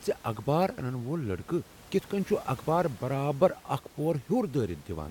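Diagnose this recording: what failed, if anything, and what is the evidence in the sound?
Nothing has failed in this speech recording; the only thing beneath the speech is the room's own background noise, about 23 dB down, which belongs to the acoustic environment rather than to any stage of the signal chain.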